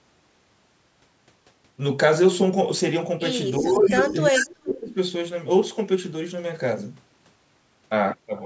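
A speech recording made over a call, with its band stopping at 8 kHz. From 3.6 to 4.96 s the voice dips and breaks up, falling by roughly 25 dB at its deepest, for about a second in total. This is speech suppressed in double talk. Both sides likely spoke at once, and the echo canceller turned down the near talker too. Inside that stretch, delayed copies of the voice come back at 3.68 to 3.89 s, 4.06 to 4.13 s and 4.37 to 4.45 s. Each trails the original by about 378 ms. The first is about as loud as the speech, and the others sit roughly 5 to 10 dB lower. This is echo leak, likely from a far-end loudspeaker whose canceller let some of its microphone pickup through.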